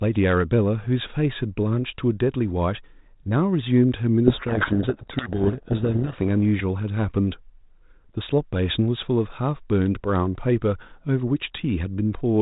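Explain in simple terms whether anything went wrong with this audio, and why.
Something did go wrong, from 4.26 to 6.21 seconds. That stretch of speech is buried in harsh, grinding distortion. This is a codec payload misread. The phone line packs sound into small coded chunks, and here the receiving end read the bits of each chunk in the wrong order. It still rebuilt sound from them, just the wrong sound. Unlike a dropout, the audio never goes silent, and it clears the instant both ends agree again.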